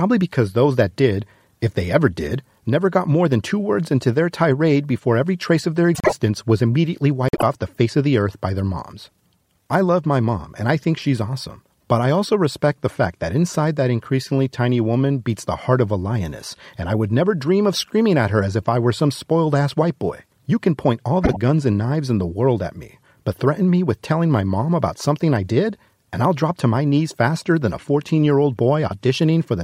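At 5.95 to 6.13 s, 7.29 to 7.43 s and 21.23 to 21.37 s the speech has frames out of order. Neighbouring 48 ms blocks, and then 24 ms blocks, play swapped, which gives a garbled flutter. On a spectrogram the seams show as abrupt vertical breaks, and the waveform jumps there without losing any time.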